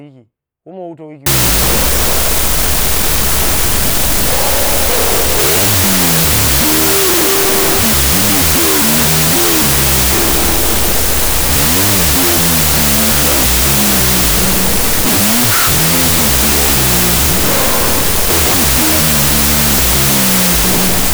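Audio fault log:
1.26–21.13 s, wrong sample width: after "woma wutau", speech drops to half speed under loud noise, fitting float read as 16-bit; a rate error stays clean.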